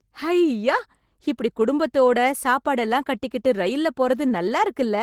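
Nothing in the speech stood out as a technical fault on listening.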